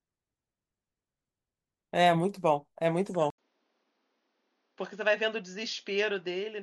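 A speech clip in which, at 3.30 s, the audio cuts out for about 80 ms and resumes duller and quieter through to the end. From that point nothing is present above 6.8 kHz, the level sits roughly 10 dB lower, and a new, faint background noise appears around 45 dB below the speech. This abrupt change in bandwidth, level and noise floor is likely the input switched to a poorer device partway through the recording.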